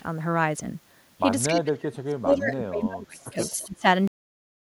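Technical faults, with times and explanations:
1.49–1.61 s and 3.37–3.71 s, echo leak: The far end's echo canceller likely failed to remove its loudspeaker pickup, so this speech returns as a copy delayed by 273 ms, sitting about 15 dB below the direct sound and heard as a faint trailing repeat.
1.49–3.38 s and 3.56–3.85 s, speech suppressed in double talk: With both sides talking, the canceller likely could not tell the local talker from echo and attenuated everything. The speech dips by roughly 30 dB at worst over about two seconds, then by about 20 dB more briefly.
4.08 s, cut-off end: The final buffers were never written or played out, so the speech stops mid-sound and drops straight to digital silence with no natural decay, leaving the last half second empty.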